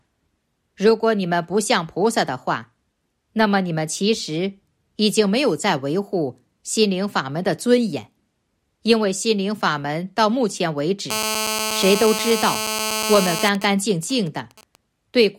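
GSM phone buzz runs from 11.10 to 13.49 s: a nearby 2G phone in a call transmits radio bursts about 217 times a second, and the audio circuitry rectifies them into a hard, raspy 217 Hz buzz rich in harmonics, steady and only about 4 dB below the signal.

GSM signalling bursts follow from 13.55 to 14.76 s, when the phone's user falls silent in the call and it sends only short groups of bursts. Rectified the same way, they form even ticks with a longer 217 Hz buzz twice a second, roughly 20 dB down.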